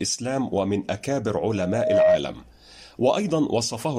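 Speech, with a loudspeaker feedback squeal from 1.49 to 2.22 s: a single 627 Hz tone swells up over about half a second until it sits roughly 10 dB above the voice. The mic is hearing its own speaker, and at that frequency the loop gain tips past one.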